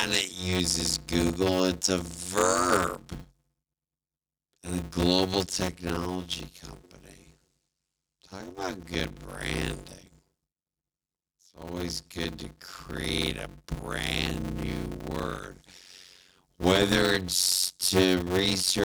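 From start to finish the speech carries a steady buzz at about 92 Hz and runs at roughly half speed, 0.533 times normal, with timbre essentially unchanged. This is a block size mismatch (padded): blocks written short, consistent with 256 samples, are zero-filled to a larger read size, inserting a gap each block.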